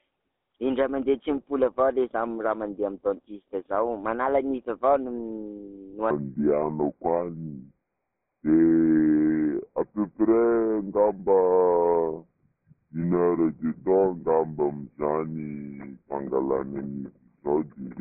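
Speech, carried throughout by a GSM full-rate codec: the band runs from about 250 Hz to 3.6 kHz with nothing above 4 kHz, and the pulse-driven vocal-tract model leaves a plainly audible buzzy, gravelly roughness, consistent with the 13 kbps full-rate coder. From 6.11 s to the end, a section at the wrong speed plays at 0.657 times normal, so pitch and tempo fall together by about seven semitones and the speech turns deep and slow. The likely cause is playback or editing against a mismatched clock.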